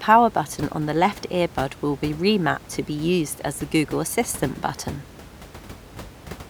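No technical faults are present.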